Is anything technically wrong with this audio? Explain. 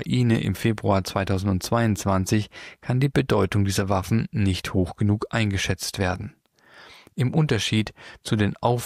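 No, nothing technically wrong stood out on listening to this audio.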